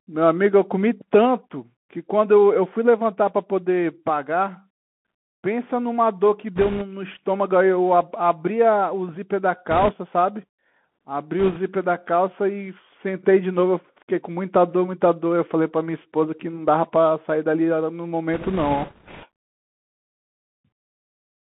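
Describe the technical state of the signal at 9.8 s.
At 9.8 s the speech is carried over the Bluetooth CVSD headset codec, as it is throughout. The sound points to a 64 kbps one-bit stream, where each bit only nudges the level up or down and the step size adapts. The band is squeezed to roughly 150 Hz to 3.4 kHz, so the speech sounds thin and boxy. The codec damage is plainly audible: a granular hiss sits underneath, and sharp, bright consonants turn scratchy where the step cannot keep up.

The moment also falls inside a burst of bit errors on a Bluetooth voice link, from 9.71 to 9.91 s. Over those 0.2 s, a few percent of the bits arrive flipped, and the damage looks spread across many short frames. Each CVSD bit carries only a small step, and its error fades out quickly. So there are no loud clicks. Instead the speech gains a rushing, crackly noise layer for that brief stretch, which then clears.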